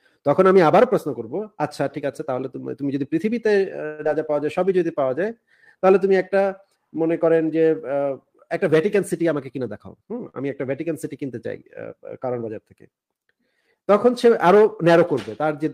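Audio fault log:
3.85 to 4.08 s, long network dropout. The sound breaks off and is replaced by a fading continuation of the last sound, heard as a buzzy hiss for about 0.2 s. It never drops to full silence. When the audio returns, about 60 ms of it is gone, so the resumed sound jumps ahead. The likely cause is a run of packets that never arrived in time. Afterwards the playout delay appears to sit roughly 70 ms later.
4.31 to 4.87 s, jitter buffer slow-down. Right after the gap, the audio plays at about 92 percent of normal speed. The pitch stays the same. Sounds are drawn out, as single pitch periods are repeated many times in a row. About 52 ms of extra material is added this way. The receiver is rebuilding its reserve after running short, so it stretches the audio instead of letting the buffer empty again.
9.60 to 10.20 s, jitter buffer speed-up. The audio runs at about 107 percent of normal speed with unchanged pitch. 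It sounds slightly hurried. Short slices of one or a few pitch periods are cut out repeatedly, about 50 ms in total. This happens when the buffer holds more audio than its target, for example after delayed packets arrive in a burst. Trimming the excess lowers the delay back toward the target.
10.29 to 10.37 s, short stall from a late packet. A sound is held about 50 ms too long. A packet was not ready when it was due, and the buffer ran dry. The receiver extended the last sound until the packet arrived, then carried on from the same point. Nothing is lost, but the playout delay grows by 50 ms.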